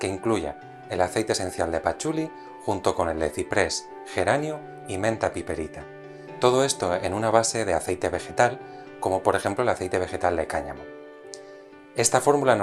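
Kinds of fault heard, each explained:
No faults turn up anywhere in this clip, so there's nothing here to flag or explain.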